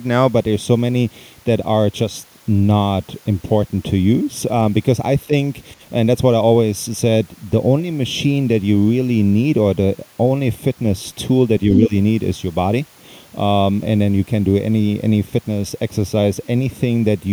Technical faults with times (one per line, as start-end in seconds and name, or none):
0.33-17.32 channel delay (comb filtering)
5.24-5.33 speech suppressed in double talk
11.72-11.76 other side's voice leaking through
11.88-11.92 speech suppressed in double talk